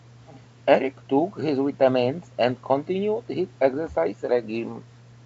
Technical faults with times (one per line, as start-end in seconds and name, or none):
none